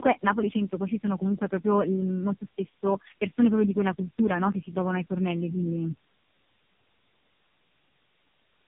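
Speech runs through tandem speech coding from start to finish. Nothing reaches above 3.5 kHz. The sound is rough, muffled and warbly. That fits three low-rate speech codecs in a row, each recoding the last one's degraded output at a network border.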